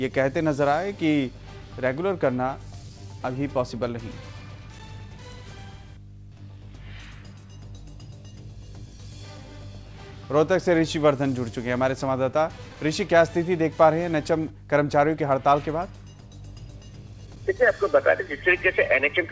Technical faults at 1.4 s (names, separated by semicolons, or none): mains hum